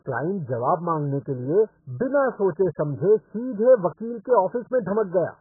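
From start to finish the speech is band-limited, with nothing above 1.7 kHz, and it carries heavy warbling, smeared artefacts that sound likely to come from AAC compression. Coding this aggressive fits a very low bitrate, around 8 kbps, where the encoder drops the upper spectrum and starves the remaining bands of bits. A simple low-pass filter would only dull the sound. The watery, fizzy texture on sustained sounds and sibilants is what marks this as codec damage.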